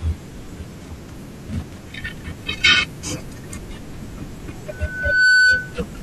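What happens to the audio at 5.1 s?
A piercing 1.5 kHz tone swells over about half a second to roughly 15 dB above the speech, from 4.71 to 5.77 s: loudspeaker feedback squeal, the microphone re-amplifying its own loudspeaker.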